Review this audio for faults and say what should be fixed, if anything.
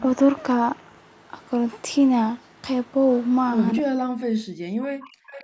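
From 3.82 to 5.33 s the speech drops away and breaks up, falling by roughly 40 dB at its deepest. This is speech suppressed in double talk. Both sides were likely talking at once, and the echo canceller could not tell the local talker from loudspeaker echo, so it attenuated both.

From 5.3 s to the end, a faint delayed copy of the speech comes back about 269 ms late, roughly 20 dB below the direct sound. This is an echo leak. The far side's loudspeaker output likely reached its microphone, and its echo canceller failed to remove it before sending it back.

Both can be prevented by using headsets or a full-duplex echo canceller with better double-talk detection and stronger residual echo suppression.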